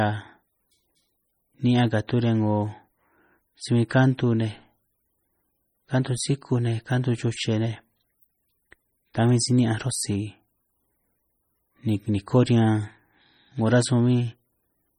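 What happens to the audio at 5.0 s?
At 5.0 s the speech has the same heavy MP3 compression damage heard across the whole clip, so nothing special happens at that instant. The sound is watery and swirly, which likely comes from an encoder starved of bits, consistent with a low rate around 32 kbps. It zeroes weak frequency lines that flicker on and off between frames, and there's nothing above about 20.9 kHz.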